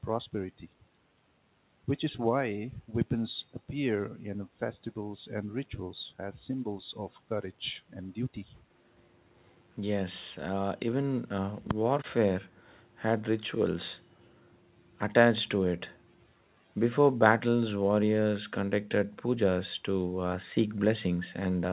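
No technical faults turn up at any point in this speech, which comes through a call codec that leaves nothing above 4 kHz.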